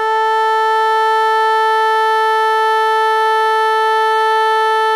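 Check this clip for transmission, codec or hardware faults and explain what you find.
One codec fault runs through the whole music clip. HE-AAC compression, throughout: nothing above 14.7 kHz, and the treble is likely rebuilt by spectral band replication, so the treble sounds gritty and metallic, consistent with a low bitrate near 24 kbps.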